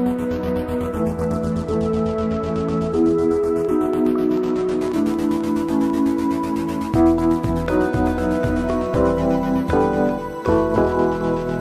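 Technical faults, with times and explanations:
3.65–5.99 s, train of clicks: about fifteen near-identical pulses arrive at roughly 6.4 per second with uneven spacing, peaking at about the signal's own level. Unlike random crackle, each tick has the same shape, pointing likely to interference or a faulty connection or power supply.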